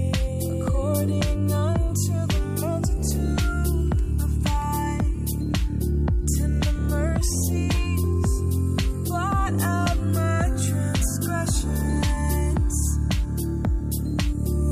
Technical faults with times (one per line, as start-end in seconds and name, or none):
none